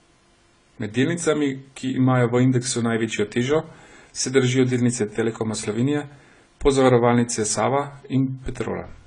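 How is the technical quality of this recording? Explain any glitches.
The speech has plainly audible coding damage from start to finish. AAC compression is the likely cause. The top end sounds dull, sibilants go fizzy and smeared, and steady sounds warble. Starved of bits, the codec drops high frequencies and fills gaps coarsely. That fits a low bitrate, around 24 kbps.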